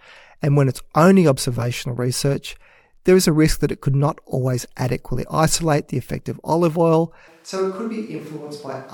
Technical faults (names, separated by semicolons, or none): switch to a distant microphone